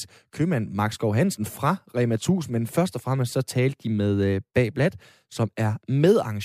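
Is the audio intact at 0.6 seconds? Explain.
Yes, the audio at 0.6 s is intact, with no dropout, click, distortion or other fault at that moment.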